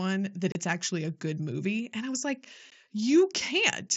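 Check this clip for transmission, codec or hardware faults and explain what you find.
Two dropouts, both unconcealed Bluetooth headset packet loss: from 0.52 to 0.55 s, just before "it's actually a good", and at 2.70 s, right after "and I was like". Voice packets between headset and phone went missing and nothing patched them, so the speech falls into short holes with hard edges, about 30 ms long (which fits four lost frames) and then 15 ms. This comes through an mSBC wideband link with its light grain.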